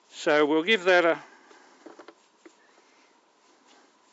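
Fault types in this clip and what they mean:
No fault types can be heard in this clip, so there is nothing here whose meaning needs explaining.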